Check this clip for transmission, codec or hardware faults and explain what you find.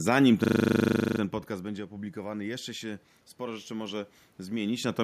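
One fault appears, triggered by a level drop at the microphone. Automatic gain rising, 1.47 to 4.88 s: after the talker moves away around 1 s and the input falls about 16 dB, the gain control gradually adds about 6 dB, so speech and room noise swell together, recovering only part of the lost level.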